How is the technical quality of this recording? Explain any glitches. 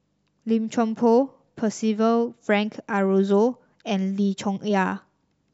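No technical faults are audible.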